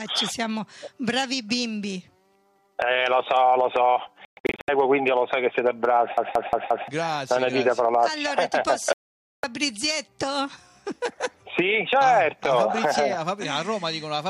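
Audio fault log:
4.25–4.69 s, digital broadcast dropout: the sound breaks into several short silent holes scattered over about 0.43 s, totalling 312 ms, with the longest lasting 120 ms. The receiver muted whenever frames failed. This fits roughly 13 lost 24 ms frames, and the audio sent during the gaps is gone.
6.17–6.88 s, CD stuck on one turn: the same 176 ms slice plays four times, with a brief mute at each jump. A scratch throws the laser back one track on every revolution, producing the fast, even stutter of a skipping disc.
8.93–9.44 s, digital broadcast dropout: the sound cuts to silence for 504 ms, which points to about 21 frames failing. The receiver stays muted until valid frames return, and the programme resumes further on with that stretch missing.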